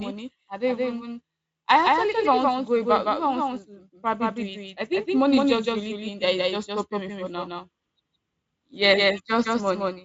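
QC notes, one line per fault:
Throughout, doubled audio track: the speech is heard twice, with a second full-band copy trailing by about 150 ms at about the same loudness as the first. This is likely the same signal reaching the mix by two paths, one slower. Unlike room echo or reverb, the copy does not decay, repeat, or add room colour. The Speex-coded band stops near 7.6 kHz with faint codec damage at most.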